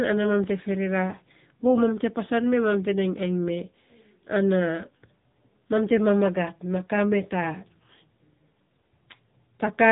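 From start to end the speech runs through the AMR narrowband mobile codec: nothing passes above 3.8 kHz, and the plainly audible buzzy, synthetic texture, which fits a low mode near 8 kbps, comes from the pulse-driven vocal-tract model and separates it from a plain telephone band-limit.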